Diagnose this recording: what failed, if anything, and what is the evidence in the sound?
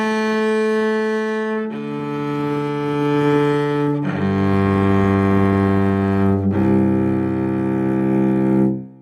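Nothing in the signal chain fails here: the waveform shows no breaks, clipping or added noise, and every stage from capture to playback behaves as a healthy path would.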